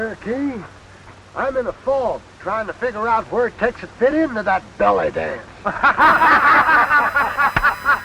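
From 6.01 s to the end a steady, faint 1 kHz whine appears: USB whine, 1 ms bus-frame current leaking through power or ground.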